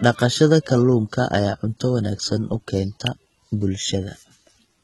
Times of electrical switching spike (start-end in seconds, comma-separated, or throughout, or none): 3.07